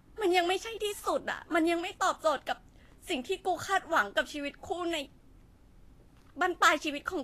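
From start to finish the speech has a hissy, grainy treble, with consonant attacks smeared and nothing above 14.2 kHz. This is plainly audible damage, most likely from Vorbis compression, which fits a bitrate around 35 kbps. The coder keeps a smooth spectral floor but quantises the upper residue so coarsely that fine detail turns into noise of similar energy. A plain low-pass filter would only dull the sound. This grit rides on top of the cut-off.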